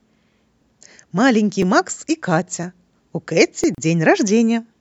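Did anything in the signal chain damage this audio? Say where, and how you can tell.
Yes. Overlapping chunks stutter the speech at 0.62, 1.62, 2.63 and 3.64 s, a tick about once per second. This happens at the driver or buffer stage. The audio is handled in 1.0 s chunks, and each new chunk starts about 6.5 ms before the previous one finishes. That short slice plays twice at every join, so a tiny repeated fragment lands at each boundary and gives the regular clicking stutter.

A gap at a join of encoded pieces opens from 3.75 to 3.78 s, a silence of about 34 ms cut into continuous speech. The edges are smeared by the codec, and the speech resumes exactly where it stopped. That points to the codec or storage stage. Separately encoded pieces were joined without trimming, so one run's start-up delay and the other's padding of its last frame both remained in the audio, leaving a short hole at the splice.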